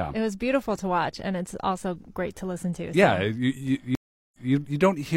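Speech drops out at 3.95 s for about 0.38 s, then resumes 0.19 s earlier by 4.52 s, a stream reconnect restarting the decoder mid-stream.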